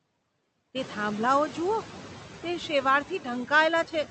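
Noise suppressor artifacts run through the whole speech clip. The suppressor pulls down the bands it judges to be steady noise by about 12 dB, so the background drops away in the gaps and comes back up beneath the speech. The room noise steps up around 1 s and then sits about 17 dB under the voice. The call path's 8 kHz cut-off limits the top end.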